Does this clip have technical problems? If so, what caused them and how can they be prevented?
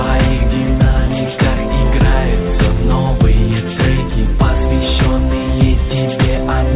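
No, this clip has no technical problems.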